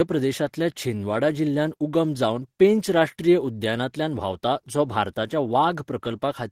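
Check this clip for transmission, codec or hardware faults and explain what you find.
Nothing faulty can be heard anywhere in this speech.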